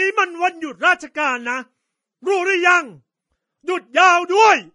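Transcoding between lossy codecs, likely an MP3 stage followed by low-bitrate Vorbis, runs through the whole speech clip. Nothing is heard above 10.6 kHz, and the dull top end carries two layers of artefacts heard together.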